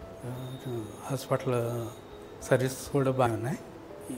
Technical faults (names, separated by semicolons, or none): damaged data in a compressed stream